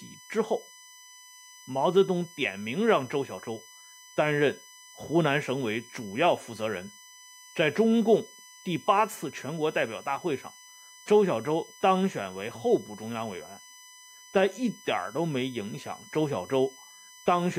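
From start to finish the speech sits over a steady USB whine: a fixed tone at 1 kHz with a series of harmonics, loudest at the sixth, 6 kHz, roughly 25 dB below the speech. Current drawn by the USB bus in 1 ms frames leaks through the power or ground into the audio path. Unlike mains hum at 50 or 60 Hz, this whine sits high and thin, on a 1 kHz grid.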